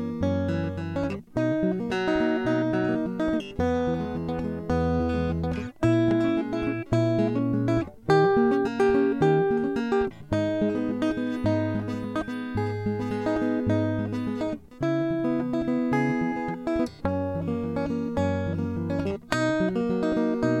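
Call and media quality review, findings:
No faults heard on this music clip, nothing here for the ticket.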